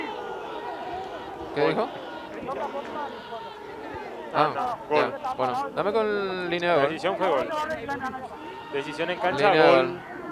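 No technical faults can be heard anywhere in the audio.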